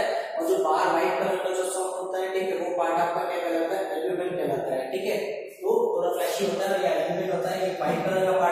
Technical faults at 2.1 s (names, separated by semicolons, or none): none